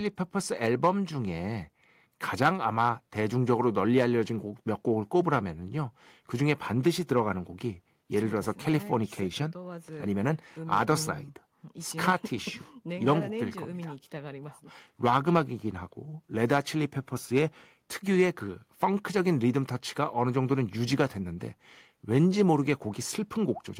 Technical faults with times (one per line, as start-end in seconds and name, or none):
none